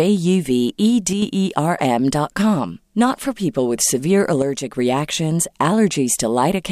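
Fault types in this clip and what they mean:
One channel drops out: The speech abruptly falls in level by about 6 dB from 1.13 to 1.22 s and again from 4.42 to 4.74 s, then snaps back. The likely cause is one stereo channel going silent, halving the mono sum.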